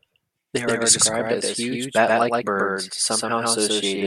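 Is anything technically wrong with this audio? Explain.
Yes. Throughout the speech, every sound is followed by a second, equally loud copy roughly 150 ms later. This is a doubled audio track. It gives a slapback, out-of-step effect with no fading tail and no added room sound, because the copy is full-band and clean rather than a reflection. The likely cause is the same signal being mixed in twice: either a slower second capture path, or an edit that left two copies offset in time.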